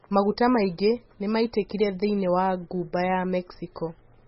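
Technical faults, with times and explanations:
Throughout, MP3 compression: nothing comes through above 5.6 kHz, so the speech sounds dull, with a watery, swirly wash as weak frequency lines flicker in and out between frames. The heavy damage fits a very low bitrate, likely around 16 kbps.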